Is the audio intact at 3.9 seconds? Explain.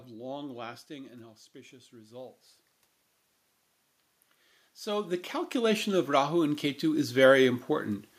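Yes, the audio is intact at 3.9 seconds, with no fault in the speech at that moment.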